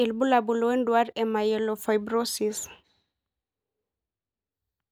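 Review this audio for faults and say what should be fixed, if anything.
No faults are audible; nothing needs fixing.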